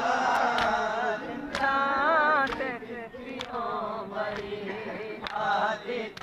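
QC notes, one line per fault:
0.35 s, electrical switching spike: there's a sharp little snap sitting right on top of the sound, gone in about a hundredth of a second and peaking somewhere near -20 dBFS. It's most likely a nearby switch, motor or static discharge arcing, with the line picking up that brief burst of interference. That's why it lands as a dry, isolated crack layered over the sound rather than as part of it.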